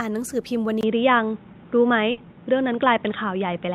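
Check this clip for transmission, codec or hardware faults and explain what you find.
Two faults are present in the speech.

From 0.81 s, after a 20 ms gap, the sound turns dull and boxy with nothing above 3.8 kHz, a level change of about 5 dB and a faint new hiss. The likely cause is an input switched to a poorer device.

From 2.11 to 2.20 s, a burst of packet loss is covered by about 60 ms of sustained, fading sound, and another 60 ms of speech is skipped.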